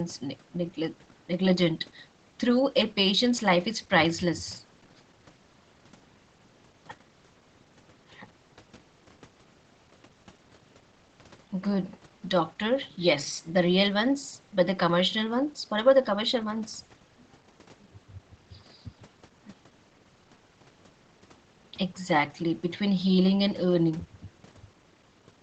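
Nothing stood out on listening to this speech, which carries the expected call-path character of Opus coding with its top end stopping around 8 kHz.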